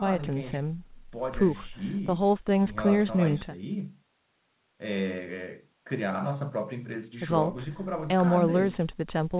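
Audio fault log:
No faults turn up anywhere in this speech clip; it just carries the usual sound of a call path using G.711 mu-law, with nothing above about 4 kHz.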